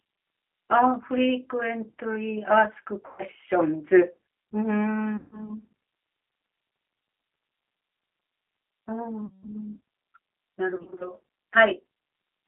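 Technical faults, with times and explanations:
Throughout: G.729 codec. The speech is confined to a telephone band of roughly 300 Hz to 3.4 kHz and sounds rough and synthetic, which fits an 8 kbit/s G.729A stream. Each 10 ms frame is rebuilt from a vocal-tract filter, a pitch predictor and a few pulses rather than from the original waveform.
3.06–3.22 s, 5.17–5.50 s, 9.26–9.48 s, 10.76–11.11 s: VoIP packet loss concealed by the speech codec. Between 130 and 170 ms of audio goes missing in each of these gaps. The last one is scattered over about 240 ms in runs of up to 30 ms. The decoder extends its last pitch and filter at falling gain, so each gap turns into a fading buzz or coloured noise, and the speech stays weakened briefly after the packets return.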